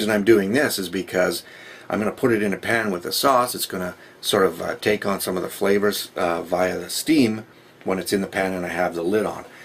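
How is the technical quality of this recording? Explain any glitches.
No glitches or technical problems are audible anywhere.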